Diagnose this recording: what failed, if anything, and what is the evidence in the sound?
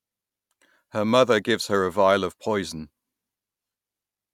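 Nothing failed: no stage of the chain leaves an audible mark anywhere in the speech, so there is no fault evidence to report.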